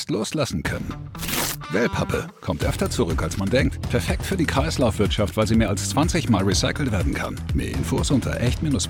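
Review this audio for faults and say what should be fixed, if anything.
No technical faults can be heard anywhere in the recording. Nothing here needs to be fixed.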